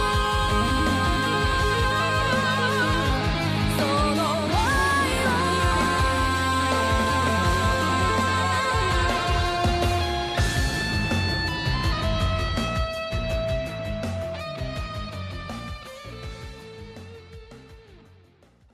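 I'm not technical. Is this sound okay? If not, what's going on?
Yes, this recording has no technical faults that a listener would notice.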